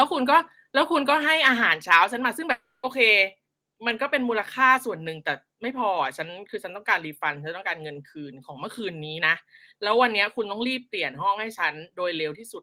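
Between 1.92 and 1.96 s the loudest peaks take on a harsh, crackling edge, the sign of microphone overload. The input level was likely set about 2 dB above what the converter can hold, so a small share of the waveform tops is flattened. Unlike codec distortion, the crackle is confined to those loudest instants.

At 2.04 s the speech and the background beneath it drop together by about 2 dB in a single step: the microphone volume stepped down, likely because the call software reacted to the distorted peak just before. Because everything falls at once and stays lower, it is a gain change rather than a fade or a gap.

From 2.51 to 2.86 s there is a long network dropout. The last sound is stretched into a fading buzz that fills the whole 320 ms gap, with no stretch of silence. That much audio most likely never arrived, and when the speech resumes the lost portion is simply missing.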